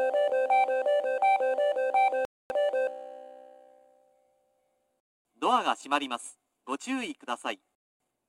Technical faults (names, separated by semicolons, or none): gap between chunks